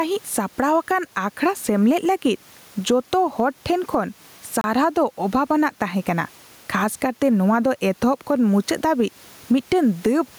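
From the start and through the whole clip, there is gain pumping. The swing is roughly 10 dB. The room noise sits about 38 dB below the speech. The likely cause is input gain set far too high, with a fast limiter or compressor clamping down on each loud syllable. Loud and quiet parts sit close together, and the speech sounds squashed.

At 4.61 to 4.64 s, a Bluetooth stall breaks the audio. The sound drops to silence for about 29 ms. Then it resumes. The likely cause is radio interference delaying packets to the headphones. Their buffer emptied, and playback halted until the resent packets arrived.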